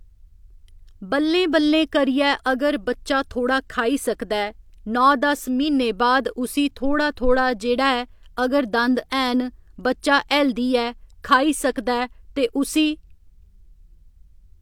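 No technical faults can be heard anywhere in the recording.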